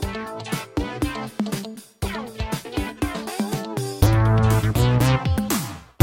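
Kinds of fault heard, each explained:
Overlap between stream segments: Two stream segments carried time stamps that overlapped. The player discarded the overlapping stretch, but that sound had not actually been duplicated. So a real piece of audio went missing. Here about 6 ms vanishes at 4.07 s. The waveform jumps across the gap. It is heard as a brief click or tiny skip at that point. It occurs once, which fits a boundary between segments about 6 s long.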